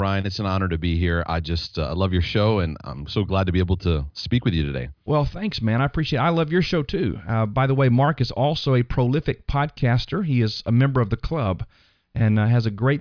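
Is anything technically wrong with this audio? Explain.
No, nothing technically wrong is audible in this speech recording.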